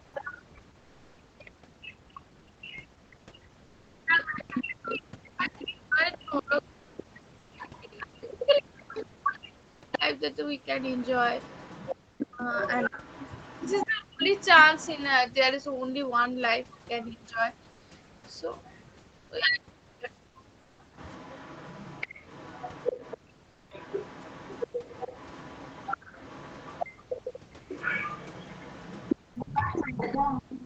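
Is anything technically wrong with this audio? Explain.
Yes, there are several echo-canceller and call-path faults here.

Speech suppressed in double talk, 0 to 10.04 s, 12.17 to 14.32 s and briefly at 26.97 s: the talker dips hard, sometimes around 40 dB, likely because the canceller ducked everything while both sides spoke.

The other side's voice is leaking through from 0.14 to 15.14 s and again from 20.97 s to the end. It sits roughly 10 to 15 dB under the talker, likely residual loudspeaker echo the canceller missed.

Comfort noise replaces the background at 6.79 to 6.97 s, 7.39 to 7.51 s, 17.71 to 17.81 s and 20.61 to 20.79 s. Each gap lasts 100 to 180 ms, and the real room tone gives way to flat synthetic hiss, mostly about 2 to 3 dB quieter. That likely points to Opus DTX.

The background is gated by the echo canceller around 23.18 to 23.7 s and within 27.32 to 29.34 s. Each time, about half a second of room sound drops by about 32 to 34 dB and then returns.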